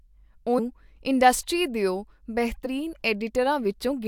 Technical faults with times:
0.58-0.60 compressed frames skipped
2.65 compressed frames skipped

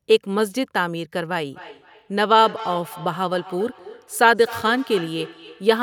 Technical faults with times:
1.52-5.82 feedback echo between two devices

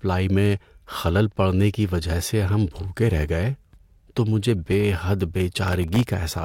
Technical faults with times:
5.68-6.03 processor overload crackle

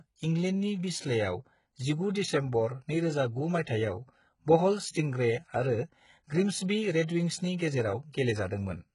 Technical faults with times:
0.00-8.94 HE-AAC compression
3.64-3.67 pre-echo
7.06-7.09 pre-echo
8.12 pre-echo

